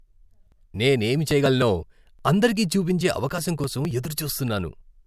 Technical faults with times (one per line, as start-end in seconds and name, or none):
none